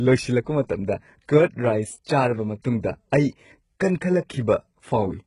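HE-AAC compression runs through the whole clip: heavy coding damage is audible, and the treble stops dead at about 11.1 kHz. The likely cause is an HE-AAC encoder, where the codec spends its bits on the lower spectrum and rebuilds the upper bands by copying lower ones upward under a coarse envelope. The damage is consistent with a rate around 12 kbps. The patched treble doesn't line up with the real harmonics, so sibilants in the speech come out gritty, metallic and lispy.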